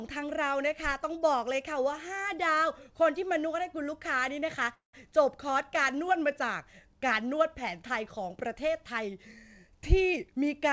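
Speech carried over a call path whose spectrum stops at 8 kHz, which fits a G.722 wideband codec, with two faults. From 4.74 to 4.95 s there is a call audio freeze: the sound is stretched into a fading buzz or hiss, then about 130 ms of near-silence, before speech resumes. That is a 0.19 s gap inserted with nothing lost, likely from delayed packets draining the jitter buffer. A spectrogram shows smeared, decaying bands, then a blank stretch. From 10.13 s to the end at 10.72 s, a jitter buffer speed-up plays the speech at about 114 % speed, with pitch unchanged and a hurried feel. Roughly 100 ms of pitch periods are cut out to shrink the buffered delay, leaving syllables visibly compressed in the waveform.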